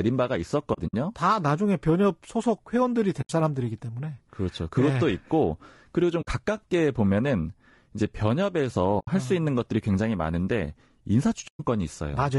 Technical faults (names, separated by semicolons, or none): low-delay AAC compression; AAC frame loss with muting